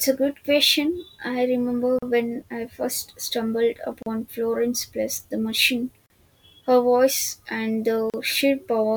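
Speech encoded in separate two-second pieces and joined untrimmed leaves encoder delay and end padding as a gap at each join. Silences of 38 to 39 ms open at 1.99, 4.03, 6.06 and 8.10 s, after "good question I remember", "when I first stumbled" and "voice and". The codec smears their edges, so the silent part is shorter.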